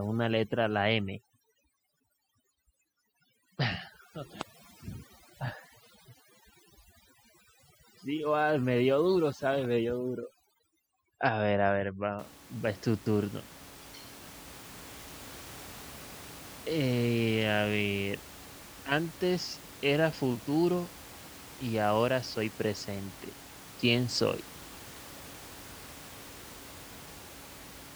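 Overdone noise removal runs from the start to 12.19 s. A noise reduction stage set far too aggressively is pulling individual frequency bands down, or out entirely, whenever they sit close to its noise estimate. The quieter parts of the speech fall under that threshold along with the noise, and the gaps go almost silent apart from faint twinkling specks. After 12.19 s the room noise returns, sitting about 19 dB below the speech.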